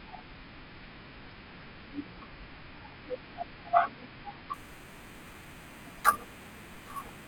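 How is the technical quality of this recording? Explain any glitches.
The recording has one clear fault in its final stretch. From 4.54 s to the end, the speech carries imaging from sample-and-hold upsampling. The pattern points to audio at about 11 kHz raised to 48 kHz by repeating each sample, with no smoothing filter. That leaves mirror copies of the speech spectrum. The first sits between 5.5 and 11 kHz, only about 14 dB below the speech. It sounds like a bright, metallic fizz that rises and falls with the voice.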